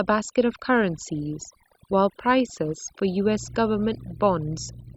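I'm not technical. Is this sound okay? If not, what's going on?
No, not quite. This speech has overdone noise removal running the whole way through. A noise-cleaning tool was pushed too hard, so it's been cutting away anything that looks like background hiss, and it's taking the softer edges of the voice along with it. That's why the gaps between phrases drop to an odd near-silence with little twinkly specks.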